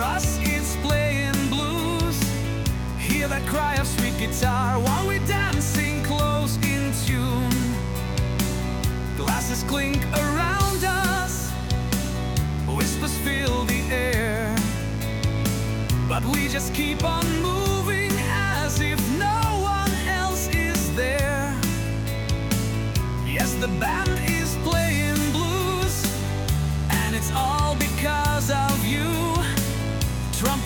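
A steady, raspy mains buzz runs through the whole clip, sitting roughly 15 dB below the sound. Sharp switching spikes entering at 50 Hz mains, twice per cycle, stack up harmonics reaching several kilohertz, drawn as evenly spaced horizontal lines across a spectrogram.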